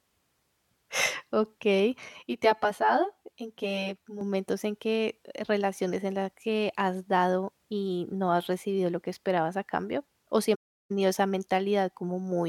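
Speech, with two separate faults. From 2.09 to 4.21 s there is channel delay causing comb filtering: one channel lags the other by around 10 ms, and summing them to mono cancels energy at evenly spaced frequencies starting near 40 Hz, so the sound turns hollow and phasey. From 10.54 to 10.91 s an AAC frame loss with muting produces a soft-edged 0.36 s silence. The decoder zeroed the missing spectra and the overlapping windows faded the sound out and back in, a gap that points to a run of roughly seventeen lost frames.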